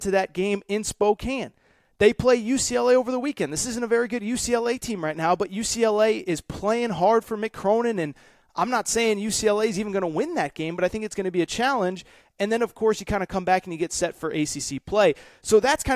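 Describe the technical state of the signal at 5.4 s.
The signal at 5.4 s is intact, with no fault audible at that moment.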